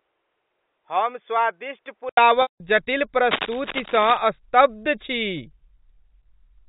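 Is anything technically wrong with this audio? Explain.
Yes, there are three faults, heard over the G.711 telephone channel that carries the whole clip.

Input switched to a poorer device, 0.0 to 2.17 s. The opening speech is dull and boxy, with nothing above 3.5 kHz. It sits roughly 5 dB lower and carries a faint background hiss well below the speech. That combination of a narrower band, its own tone and a lower level points to the system having likely recorded from another microphone or a headset's call profile. At 2.17 s the input changes back, with a brief 80 ms silence at the switch, and the sound opens up.

Packet loss with pitch repetition, 2.42 to 2.60 s. About 180 ms of audio is missing, which points to a run of roughly nine 20 ms packets dropped in transit. The receiver bridges the gap by repeating the last pitch period, so the sound briefly holds as a buzzy, sustained tone. Because the loss is longer than the roughly 50 ms fade-out, that tone dies away into silence before the speech returns with a short cross-fade.

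Cable scratch noise, 3.31 to 4.18 s. For nearly a second, dense, irregular bursts of crackle and rustle ride over the speech at only about 5 dB below it, so they are plainly audible. This is likely a worn cable, connector or control being moved. As it shifts, its contact resistance changes rapidly, and each change injects an uneven burst of noise into the signal.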